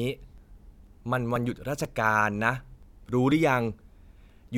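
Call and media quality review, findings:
Periodic USB or driver dropouts, 0.38–4.30 s: ticks every 0.49 s, each skipping around 10 ms of speech. The fixed spacing distinguishes them from the irregular gaps of network packet loss.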